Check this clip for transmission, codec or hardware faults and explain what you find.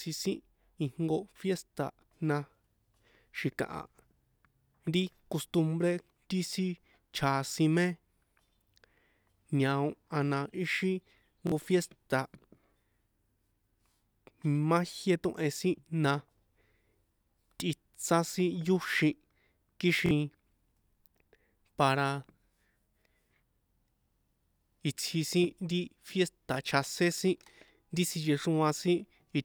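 Three repeated-buffer faults are audible in this speech. At 11.47–11.52 s, just after "ñao a na ixi", and at 20.06–20.11 s, a roughly 23 ms block plays twice more, dropping about 50 ms of audio. At 26.54–26.56 s, just before "chjasén sin ri", one extra play drops about 20 ms. Each time, fresh audio arrived late, so the device replayed its last block, which fits a 1024-sample buffer. The hard joins produce a brief stuttering buzz.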